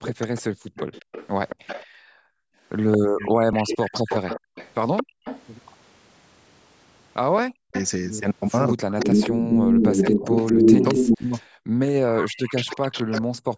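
From 0.03 to 5.42 s a second copy of the voice trails the original by 223 ms at roughly 10 dB below it. This is an echo leak, likely from a far-end loudspeaker whose echo canceller let part of the playback back into the microphone.

From 0.12 to 0.34 s the voice briefly dips by around 40 dB. This is speech suppressed in double talk, likely because the canceller could not separate the talker from the echo while both were present, so it pulled everything down.

From 0.62 to 2.6 s the room sound drops out by about 40 dB for around a second in total, then returns. This is background gated by the echo canceller, which clamped the microphone while the loudspeaker played. A shorter gate follows at 5.04 to 5.25 s.

From 3.2 to 4.38 s the voice is suppressed again for about half a second. At 3.53 s there is a jump in the sound where roughly 30 ms is missing. This is a dropped buffer (overrun), likely samples overwritten before they were read, with the two sides spliced together.

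From 7.37 to 13.21 s the echo returns at the same 223 ms delay, now louder than the direct voice by around 5 dB. From 7.42 s to the end, double-talk suppression chops about three seconds of the voice.

A second skip at 9.12 s loses roughly 20 ms. The call microphone processing takes out the lowest bass, which is normal for that path.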